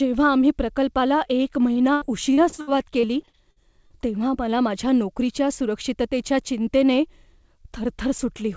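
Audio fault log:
1.73–3.93 s, repeated packet loss (robotic sound): starting just after "आम्ही प्रकल्पाला एक" and clearing by "तेव्हा मला माझ्या नोकरीच्या", the speech turns choppy through about a dozen short dropouts, the longest 82 ms. About 420 ms of the span is patched by stretching out the last received sound, roughly a fifth of the stretch. That repeated smearing leaves the speech choppy with pieces missing, with the G.722 call path cutting everything above 8 kHz throughout.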